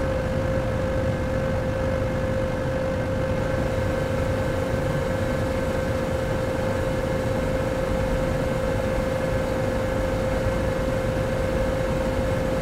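From the start to 3.38 s there is a time-stretched section: the audio runs at about 1.92 times its natural pace while its pitch stays put, so it sounds rushed before snapping to normal pace. The likely cause is software squeezing the passage to fit a length by dropping short pieces. On a spectrogram, events crowd together while harmonic bands hold their frequency, and the waveform shows small seams where segments were joined.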